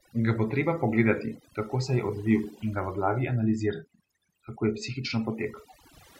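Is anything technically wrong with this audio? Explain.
Yes. Throughout this speech clip there is overdone noise removal: a noise reducer set far too hard pulls individual frequency bands down or out whenever they sit near its noise estimate, taking quiet parts of the voice along. Pauses collapse to near silence with twinkling specks. A spectrogram shows a dark, blotchy background scattered with isolated bright dots.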